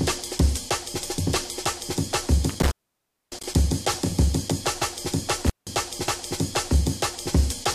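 Intermittent contact at 2.49 to 3.54 s, and again at 5.47 to 5.67 s: a loose cable or plug briefly loses its connection, so the signal path opens and the sound drops out. The first gap stays open for about 606 ms, the second for about 165 ms. Each dropout is bracketed by crackle as the contact scrapes open and closed, and a faint hiss remains while the line is broken.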